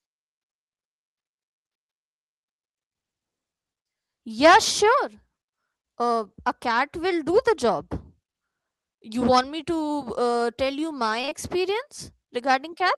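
Short concealed packet loss strikes at 11.21, 11.25 and 11.30 s, three back-to-back 20 ms gaps in the speech that never arrived in time. The receiver extended the preceding sound across each hole and cross-faded back, leaving a brief smeared, wobbling patch lasting about a tenth of a second.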